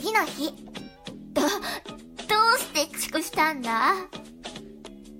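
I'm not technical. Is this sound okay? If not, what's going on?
No. There are compressed frames skipped: chunks of the compressed file were missing or rejected as damaged, so the player jumped ahead. At 3.16 s about a fifth of a second vanishes, and at 4.86 s about a tenth.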